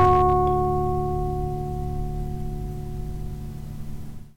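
From the very start to about 0.34 s, loud peaks break up into a gritty crackle with a harsh edge. This is hard clipping: the signal drives about 4 dB past what a stage can pass, so peaks are sliced flat, spraying harmonics high up the spectrum.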